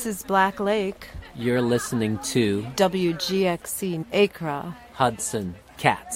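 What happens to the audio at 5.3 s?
Nothing happens to the audio at 5.3 s; it plays through that moment intact, with no dropout, click or distortion.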